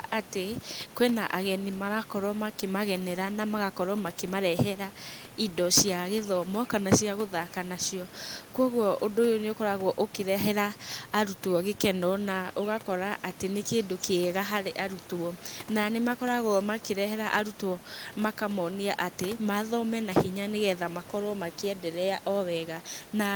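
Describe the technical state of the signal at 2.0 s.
At 2.0 s the signal is intact, with only the room's own background noise sitting about 21 dB below the speech.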